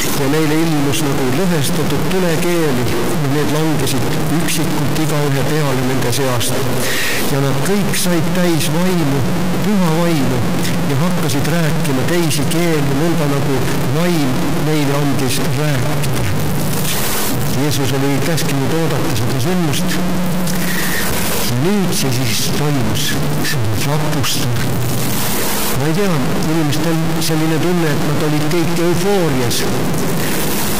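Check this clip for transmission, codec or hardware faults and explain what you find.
One hardware fault runs through the whole clip. Throughout, a stuck bit, likely from a broken data line, offsets half the samples by about -10 dBFS, giving harsh buzz that, unlike clipping, also fills pauses.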